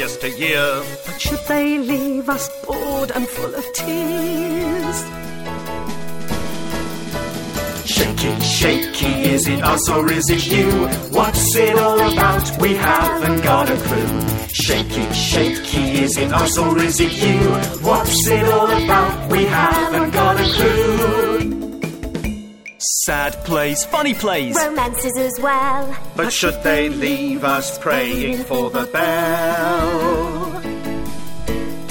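No technical faults can be heard anywhere in the recording.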